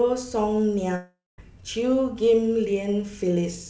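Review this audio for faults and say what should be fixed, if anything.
A long network dropout, likely a stall in packet delivery, cuts into the sound from 0.96 to 1.40 s. About 0.42 s of audio never arrives. The receiver first stretches the last sound into a fading buzz, then leaves about 0.2 s of silence before the signal returns with that stretch missing. Throughout, the audio stops at 8 kHz, which fits a G.722 call codec. To prevent this, stabilise the network link and enable forward error correction or redundancy on the call.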